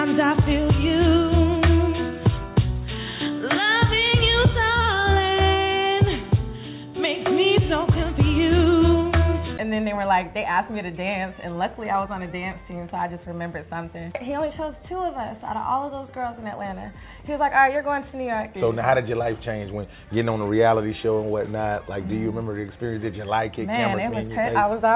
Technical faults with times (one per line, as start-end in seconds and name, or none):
none